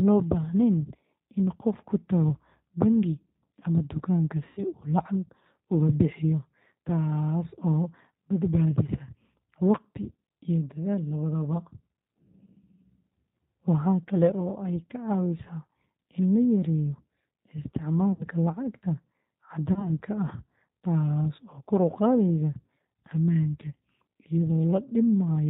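Right from the start the speech has that slightly rough, synthetic edge of the G.729 codec, which fits an 8 kbit/s stream. Nothing comes through above 4 kHz, and the pulse-based excitation leaves the voice sounding rough and plainly processed.

Then there are three dropouts where VoIP packet loss was concealed by the speech codec, at 4.47–4.64 s, 18.12–18.24 s and 19.73–19.91 s. The missing stretches sound like roughly 100, 70 and 30 ms of audio. In each, the decoder stretches the last sound out and fades it, and the voice stays thin for a moment afterwards.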